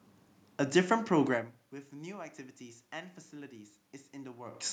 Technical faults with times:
none

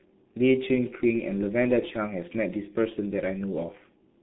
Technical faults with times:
0.00-4.22 G.723.1 codec

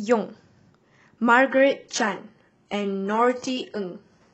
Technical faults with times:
1.49-4.33 adaptive stream at a lower bitrate

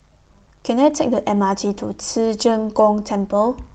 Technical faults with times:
none

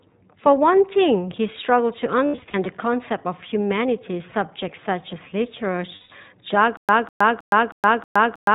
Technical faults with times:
0.00-8.55 iLBC codec
2.26-2.56 lost iLBC frames
5.96-6.12 lost iLBC frames
6.77-8.55 stutter with silent gaps

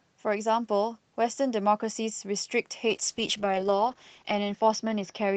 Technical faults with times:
2.88-5.36 call bitrate drop

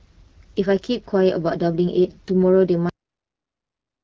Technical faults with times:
2.89-4.04 cut-off end

